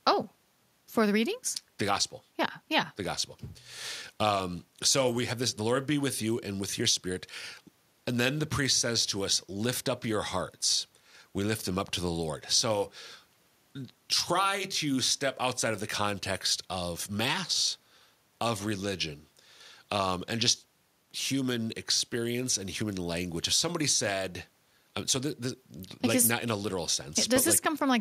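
A speech recording with nothing technically wrong with it.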